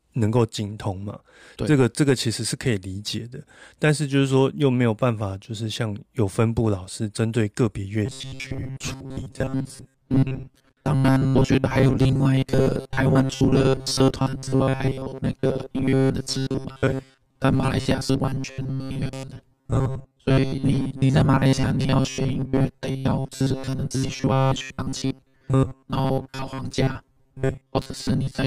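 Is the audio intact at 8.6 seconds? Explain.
No. From 8.06 s to the end, new audio likely arrives too seldom, so a 7.5 ms chunk is replayed in place of most of the speech. This robotic sound from repeated short buffers forces a rigid, metallic 133 Hz buzz that only loosely follows the speech.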